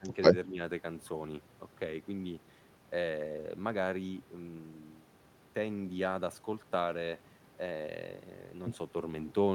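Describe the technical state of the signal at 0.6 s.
At 0.6 s the speech is just coming back from a brief dip: from 0.45 to 0.59 s it sinks by a few decibels, around 5 dB at worst. This is speech suppressed in double talk, likely an echo canceller turning down the talker's voice along with the loudspeaker echo while both talk.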